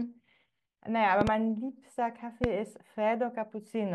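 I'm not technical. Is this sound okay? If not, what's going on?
No. A loud pop occurs twice: a quick double pop from 1.21 to 1.30 s, then a single one from 2.44 to 2.46 s, each far louder than the speech, which carries on underneath. A sudden electrical jolt, likely from a plug, switch or static, caused these sharp bangs.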